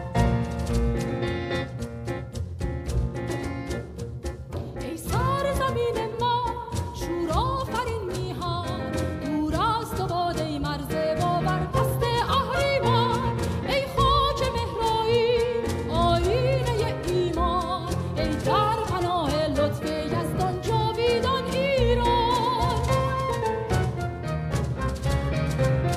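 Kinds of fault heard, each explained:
No faults can be heard in any part of the recording.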